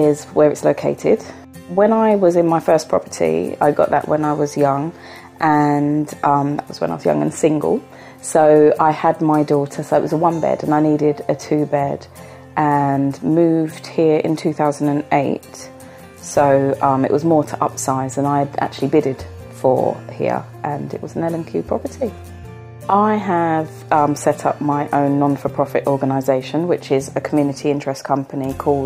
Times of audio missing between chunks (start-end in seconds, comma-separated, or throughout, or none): none